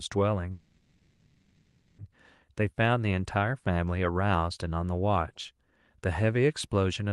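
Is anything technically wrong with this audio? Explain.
Yes. From 0.51 s to 2.00 s the speech stops and the last sound is stretched into a fading buzzy hiss lasting about 1.47 s, after which the talker resumes exactly where they left off, with nothing skipped. This is a call audio freeze, likely caused by packets stalling in transit until the jitter buffer emptied. The receiver filled the wait with synthesized continuation, so the stall inserts about 1.47 s of delay. The speech around it carries the coding texture and roughly 12 kHz ceiling of the Opus call path.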